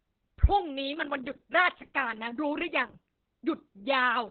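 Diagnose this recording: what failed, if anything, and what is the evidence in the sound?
The failure is at the codec stage: Opus voice compression at a very low rate affects the speech throughout. The voice sounds muffled, hoarse and slightly robotic. On a spectrogram, energy stops sharply at 4 kHz with nothing above it, and the harmonics look smeared and grainy. The SILK coder has narrowed the band to narrowband and coded the excitation coarsely, which fits a bitrate near 6 kbps.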